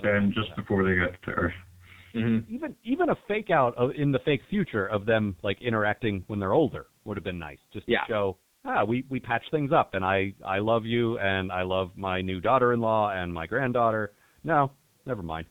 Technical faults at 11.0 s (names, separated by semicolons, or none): G.723.1 codec